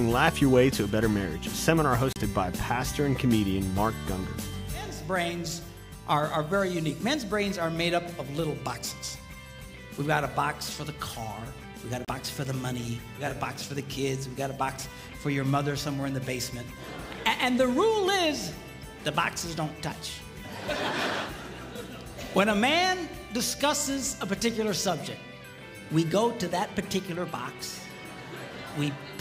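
At 2.13 to 2.16 s and again at 12.05 to 12.08 s, a digital broadcast dropout mutes the audio briefly. Each gap lasts about 32 ms, which fits a single corrupted frame, and that sound is lost.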